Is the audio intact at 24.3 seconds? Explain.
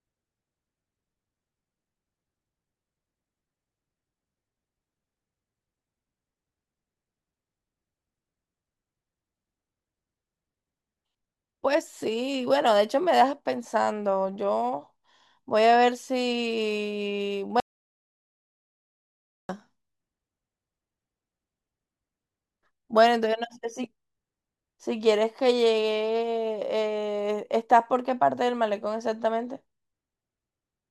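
Yes, the speech at 24.3 seconds plays through cleanly, with no audible dropout, click, distortion or other fault at that moment.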